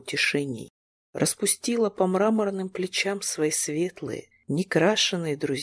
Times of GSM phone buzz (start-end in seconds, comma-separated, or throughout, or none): none